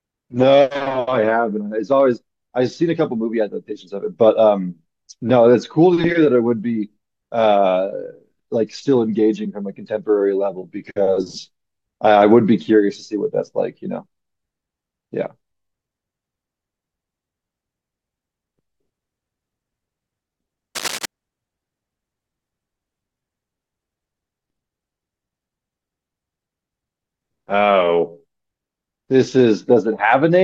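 From 20.75 to 21.06 s, cable scratch noise sits over the speech: a dense, ragged burst of scratching roughly 10 dB below the signal. A worn cable or connector being moved, with its contact resistance fluctuating rapidly, is the likely cause.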